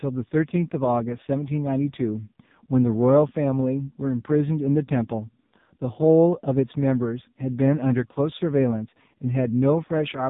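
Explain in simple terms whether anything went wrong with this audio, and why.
From start to finish, the speech went through the AMR narrowband mobile codec, the old mobile-phone coder, at a very low data rate. It rebuilds the voice from a rough model, so it sounds buzzy, synthetic and muffled, with nothing above 3.8 kHz.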